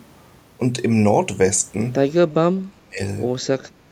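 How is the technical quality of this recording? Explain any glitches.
The recording has one clear glitch: speech suppressed in double talk, from 2.23 to 3.0 s. This is likely an echo canceller that could not tell the talker's speech apart from loudspeaker echo while the far end was also talking, so it turned the near-end signal down along with the echo. Across most of that stretch the speech sinks sharply, at its deepest by roughly 35 dB, so it nearly vanishes before returning at full level.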